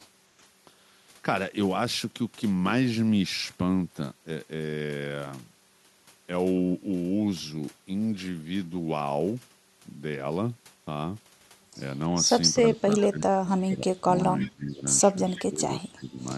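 A speech recording with two faults in its last few seconds. Speech suppressed in double talk hits 12.69–14.08, 14.24–14.86, 15.26–15.63 and 15.8–16.2 s, dipping by up to about 20 dB. This is likely an echo canceller ducking during simultaneous talk. Brief echo leak appears at 12.98–13.03, 13.71–13.75 and 14.4–14.49 s: a faint copy delayed 334 ms, about 20 to 30 dB down, likely loudspeaker pickup that the canceller missed.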